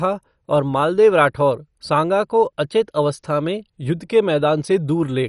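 MP2 compression runs throughout the clip. The speech sounds dull, with nothing above 11.3 kHz, and carries a gurgling, granular roughness. The likely cause is MPEG Layer II coding at a low rate, consistent with roughly 48 kbps, shutting off upper sub-bands and coarsely quantising the rest.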